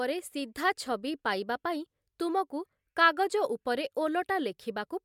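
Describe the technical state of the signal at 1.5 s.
At 1.5 s the speech signal is intact, with no audible technical fault at that moment.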